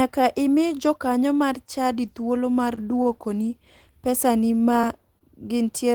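At 2.75 to 2.79 s, just after "mar chadi thuolo mar", there is a short concealed packet loss. About 20 ms of audio never arrived, and the decoder bridged the gap by extending the preceding sound before blending back, which leaves a brief smear. Because real audio is gone, a short sound can be lost here.

From 3.03 to 3.07 s, still just after "mar chadi thuolo mar", comes a short stall from a late packet. The jitter buffer ran dry and the last sound was held about 20 ms longer until the packet arrived. Nothing is missing. The sound is simply drawn out, and what follows lands 20 ms late.

The pattern repeats. A concealed loss at 4.81 to 4.85 s smears over about 20 ms of missing audio, and a late-packet stall at 5.19 to 5.23 s stretches the sound again by about 20 ms without dropping anything.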